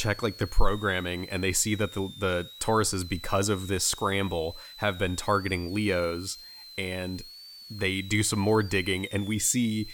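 Switching supply whistle runs from start to finish: a thin high tone wandering between about 3.4 and 4.7 kHz, centred near 4 kHz and roughly 20 dB under the speech. A switching power supply dropping into an audible burst mode shifts its pitch with changing load.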